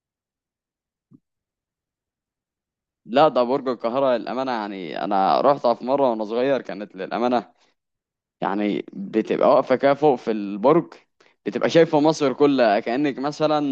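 No technical faults occur in this speech, so there is nothing to describe in time order.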